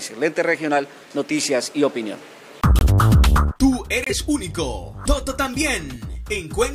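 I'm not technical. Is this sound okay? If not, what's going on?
No, there are two short dropouts. At 2.79 s the sound cuts out for about 40 ms, and at 4.04 s it cuts out again for about 80 ms, ending at 4.12 s. Each is a corrupt frame muted. The audio is stored in small compressed chunks, and a few got scrambled. The player couldn't decode them, so it played silence instead. That's why each gap starts so suddenly. Everything after them still lines up in time.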